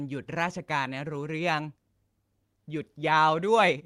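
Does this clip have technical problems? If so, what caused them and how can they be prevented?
No, the signal shows no technical faults that can be heard anywhere in the recording, so there is nothing here that needs preventing.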